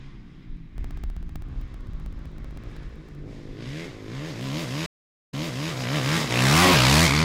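From 0.78 to 3.15 s, periodic USB or driver dropouts occur: something stalls the audio path every 64 ms, and each time roughly 2 ms of sound is replaced by silence. Around forty evenly spaced ticks result, heard only where sound is present.

At 4.86 s comes a stream reconnect. The connection drops, leaving 417 ms of silence, and a fresh decoder picks the stream back up 432 ms earlier than where it stopped. A short stretch of sound repeats, ending by 5.71 s.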